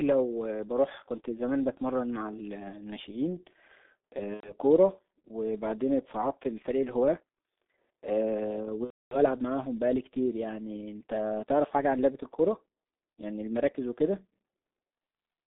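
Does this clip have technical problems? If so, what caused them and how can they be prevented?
Yes. The whole clip passed through the G.723.1 codec, and two stretches were damaged by VoIP packet loss concealed by the speech codec.

The G.723.1 codec is audible from start to finish. The speech is confined to roughly 250 Hz to 3.7 kHz and sounds muffled and hoarse, with smeared consonants. This points to a very low bitrate, around 6.3 kbit/s, and heavy coding damage. The coder works in 30 ms frames and updates its voice model only slowly, so fast changes get blurred. On a spectrogram, everything above 3.7 kHz and below 250 Hz is empty, and the harmonics inside the band look coarse and smeared. To prevent this, negotiate a wideband codec such as G.722 or Opus instead of G.723.1.

VoIP packet loss concealed by the speech codec occurs from 4.34 to 4.52 s and from 8.84 to 9.18 s. About 90 ms of audio is lost in the first event, which fits three 30 ms frames. 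About 270 ms is lost in the second, which fits nine frames. In each gap the decoder kept repeating its last pitch and filter at decreasing gain, so the speech is stretched into a fading sound that is muted from the third lost frame in a row. On a spectrogram, the harmonic lines run flat and unchanging, then dim. On the waveform, identical repeating cycles shrink in amplitude. To prevent this, use a jitter buffer, forward error correction or a more reliable network path.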